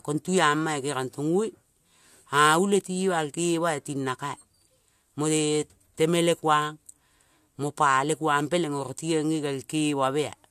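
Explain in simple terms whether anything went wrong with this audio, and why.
Nothing went wrong with this recording, and there is no fault to point to at any moment in it. The speech comes across steadily, without breaks, jumps or sudden changes.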